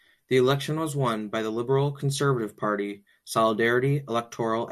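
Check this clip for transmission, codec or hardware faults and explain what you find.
Nothing turns up here: listening through the speech, there's no sign of any transmission, codec or hardware trouble to point to.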